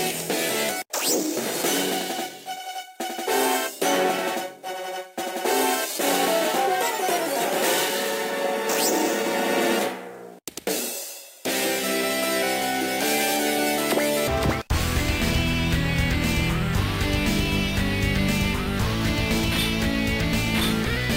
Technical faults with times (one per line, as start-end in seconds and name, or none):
none